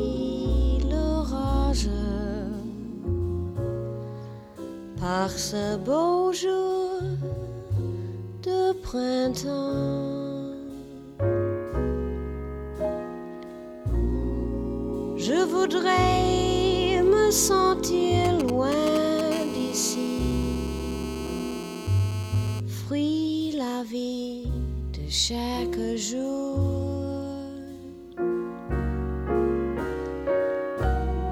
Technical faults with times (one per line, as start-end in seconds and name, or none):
18.25-19.21 GSM signalling bursts
19.32-22.60 GSM phone buzz